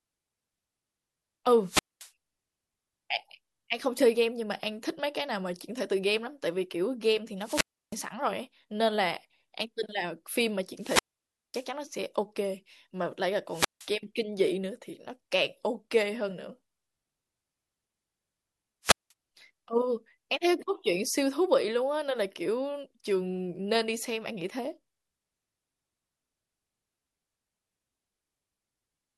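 Bursts of hiss collapse into near-silence at 1.63, 7.4, 10.78, 13.49 and 18.83 s, muting for 0.16 to 0.55 s: wireless microphone squelch dropouts, as fading radio signal trips the receiver's squelch.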